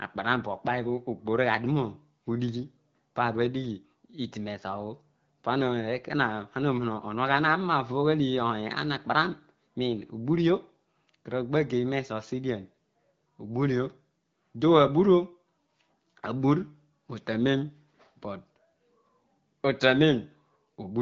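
Nothing stood out on listening to this speech, which comes through an AMR wideband (HD Voice) codec at 12.65 kbit/s.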